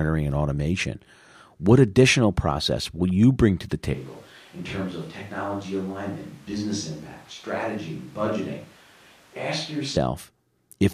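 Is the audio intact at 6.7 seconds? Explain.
No, 6.7 s falls inside a switch to a distant microphone that runs from 3.94 s, right after "you bring to the", to about 9.97 s. The close mic's signal likely dropped out, leaving a mic further from the talker. The speech suddenly turns roomy and hollow, thinner in the bass, and roughly 10 dB quieter, with room noise sitting only about 25 dB below it. Then it snaps back just as abruptly.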